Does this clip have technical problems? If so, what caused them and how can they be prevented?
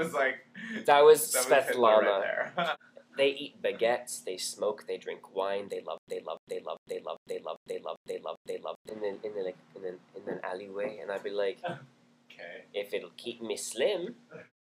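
Yes. From 5.98 to 8.89 s there is a stutter with silent gaps: a 295 ms burst repeats 7 times, each followed by about 102 ms of dead digital silence, so it returns every 396 ms. This was likely the player stalling and replaying its last fragment on each retry, and the audio meant for that stretch is lost. Unlike a plain dropout, the same fragment keeps returning. Deeper buffering and steadier delivery would prevent it.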